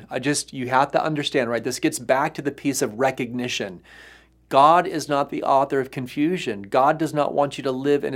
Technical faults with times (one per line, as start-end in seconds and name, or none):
none